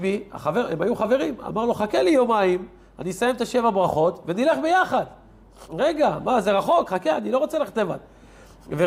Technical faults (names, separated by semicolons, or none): none